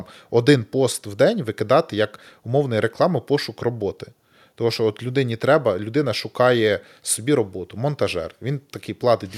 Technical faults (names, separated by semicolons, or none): none